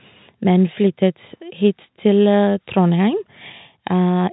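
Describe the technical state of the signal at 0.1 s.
At 0.1 s the audio is intact, with nothing wrong beyond the narrow telephone band it travels in.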